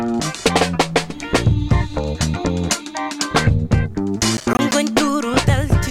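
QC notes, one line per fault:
4.37–4.72 s, processor overload crackle: a gritty burst of crackle, from around ten missed buffer deadlines in a row, each leaving a hard-edged silent gap of roughly 10 ms.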